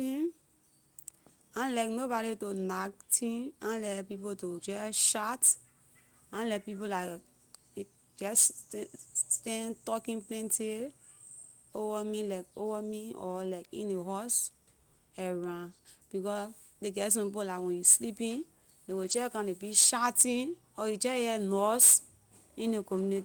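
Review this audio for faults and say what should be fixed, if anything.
From 19.03 to 19.17 s the speech turns briefly rougher and noisier, with no dropout: a lost packet rebuilt from error correction. About 80 ms of audio was lost in transit, which fits four separate packets, and the decoder filled the space with the low-bitrate redundant copies that Opus in-band forward error correction carries in each following packet. Continuity is preserved, but those frames have reduced detail. To prevent it, fix the packet loss on the network path.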